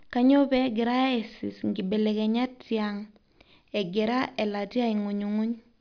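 Nothing in this recording trips up the ear at any point, with no glitches, dropouts or damage anywhere in the speech.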